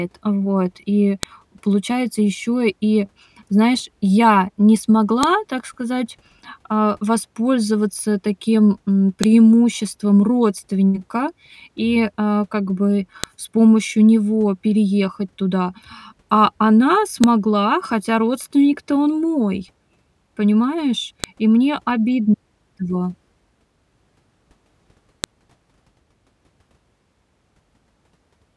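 Separate pieces of audio, each about 4 s long, were joined without their WAV headers being stripped, so a file header played as audio at every seam. The header bytes become a burst of meaningless samples, heard as a sharp, loud click at 1.23, 5.23, 9.24, 13.24, 17.24, 21.24 and 25.24 s, for example right after "и знаешь я не" and after "и а как бы". Each click cuts through the speech regardless of what is being said.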